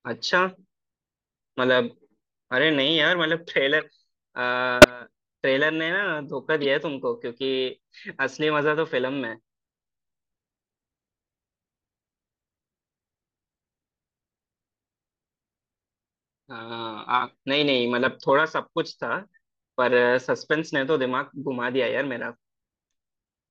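At 3.80 to 3.86 s, 4.82 to 4.90 s and 6.61 to 6.65 s, corrupt frames are decoded. Flipped bits made the decoder place energy at wrong frequencies. Each is a brief glitch, peaking near about -25, 0 and -15 dBFS.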